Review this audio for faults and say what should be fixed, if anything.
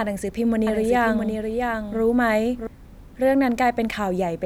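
Doubled audio track, 0.67 s to 2.67 s: a second full-band copy of the speech trails the original by about 0.7 s, a few dB quieter, with no decay or room colour, and it cuts in and out abruptly. The likely cause is a slower second capture path or an edit that left two misaligned copies. To prevent it, monitor or mute duplicate input routes and check edits for stacked copies of the same region before export.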